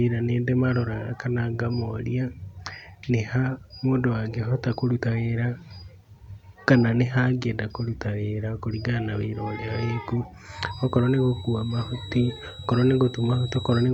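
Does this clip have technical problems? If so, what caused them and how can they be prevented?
Yes. From 10.47 s to the end of the speech clip, a thin, steady feedback whistle sits at 3.9 kHz, well below the speech and slowly swelling and fading in level. The likely cause is a loudspeaker-to-microphone loop held right at its feedback threshold, so one frequency keeps ringing without building up. Unlike a full feedback howl, it never builds into a howl, and unlike mains hum, it is a single high tone with no low harmonic series. To prevent it, lower the monitor gain, move the microphone away from or off-axis to the loudspeaker, or notch out 3.9 kHz.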